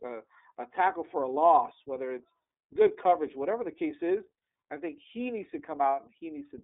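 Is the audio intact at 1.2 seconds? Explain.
No, the iLBC codec runs throughout, coding each 30 ms frame independently and passing nothing above 3.8 kHz. Speech at 1.2 seconds sounds muffled, slightly rough and synthetic.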